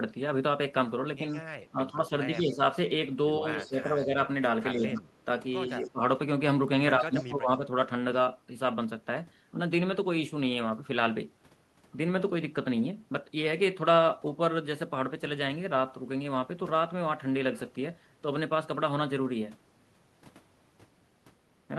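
A speech recording with speech suppressed in double talk from 1.32 to 6.0 s and 6.98 to 7.63 s: the voice dips by up to about 15 dB, for around two and a half seconds in total, likely an echo canceller muting both talkers at once. Echo leak sits at 1.41 to 2.37 s, 3.62 to 5.89 s and 7.23 to 7.27 s as a faint copy trailing by 110 ms, about 25 dB down (about 35 dB in the last). Suppression removes level from the voice, while leak adds a quiet delayed duplicate.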